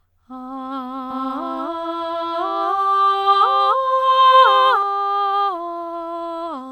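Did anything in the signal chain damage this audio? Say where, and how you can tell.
Yes. From 1.11 s to 4.83 s the music carries a doubled audio track: an undecayed, full-band copy about as loud as the original, trailing by roughly 300 ms and starting and stopping abruptly. The likely cause is a second, slower capture path or a misaligned edit at the driver or storage stage. A spectrogram shows every onset repeated at that fixed offset, and the waveform shows each transient twice.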